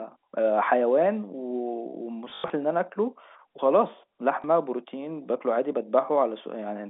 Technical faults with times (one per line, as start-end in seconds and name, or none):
2.30-2.50 packet loss with last packet repeated
4.42-4.44 packet loss with last packet repeated